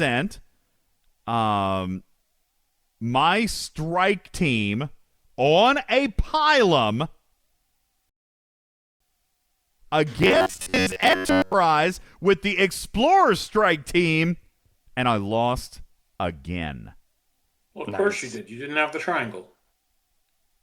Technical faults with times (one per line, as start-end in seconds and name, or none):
8.09-9.00 rebuffering stall
10.18-11.54 robotic sound from repeated short buffers